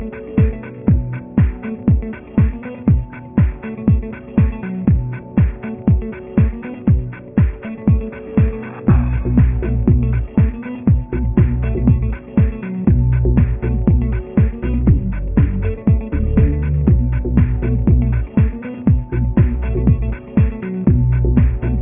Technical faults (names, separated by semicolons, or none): none